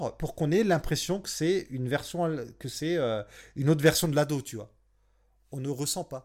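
From 3.86 s, right after "que c'est une autre", through the end of the clip, the speech shows pre-emphasis left on. The treble lift applied ahead of storage was never undone by the matching de-emphasis, so high frequencies stand about 8 dB above the 1 kHz level at 10 kHz, a shape consistent with the CD 50/15 µs curve. The result is thin, bright speech with exaggerated sibilance.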